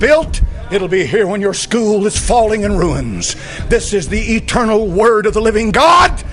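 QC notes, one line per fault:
No faults heard anywhere in the audio.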